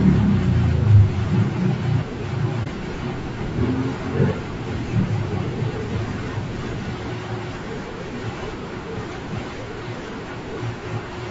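Throughout, the speech sounds rough and grainy, with noise between harmonics and a thin top band, most likely from low-delay AAC compression (AAC-ELD) at a low bitrate around 32 kbps. From 2.63 to 2.68 s the sound dips briefly. This is AAC frame loss with muting, consistent with a single lost frame whose spectrum the decoder zeroed.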